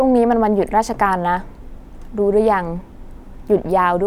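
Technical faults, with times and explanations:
No technical faults were found in this speech recording.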